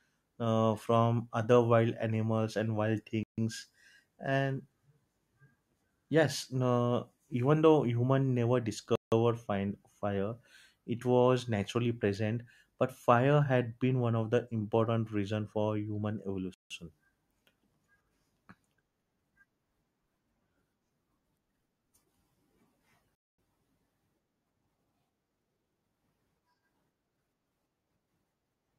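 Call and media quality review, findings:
Speech drops to silence at 3.23, 8.96, 16.54 and 23.15 s (about 0.14–0.23 s each), then resumes mid-flow: likely Bluetooth stall, headset buffer underrun while interfered packets were retransmitted.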